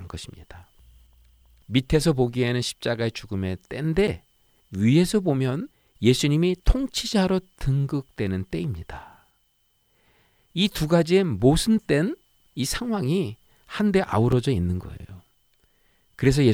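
At 4.07 s and again at 14.32 s the speech drops into a block of digital silence: samples are replaced by silence, likely because the output buffer wasn't filled in time. The first hole lasts about 8.7 ms and the second about 2.9 ms, which spans 128 samples. Each is heard as a tick or a dip rather than as silence. What sets it apart from a concealed dropout is the hard edges: no fade or smeared fill, just abrupt cuts.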